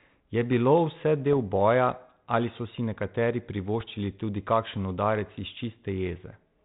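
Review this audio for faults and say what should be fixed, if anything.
Bit errors on an ADPCM link cause pops and rough bursts at 1.33 to 1.37 s and at 3.80 to 3.92 s. Each flipped bit knocks the decoder's step size and predictor off track. The damage then rings on briefly, with a short jump in level. The second burst is longer, and it comes with a higher error rate on the link. The band-limited sound fits a 32 kbit/s G.726 link, and that coding carries on as normal around the bursts. To prevent this, improve the radio or line link, or add error protection so corrupted frames are caught before decoding.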